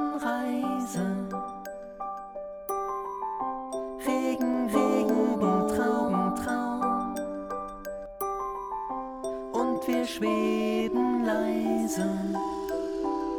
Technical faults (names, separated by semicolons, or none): doubled audio track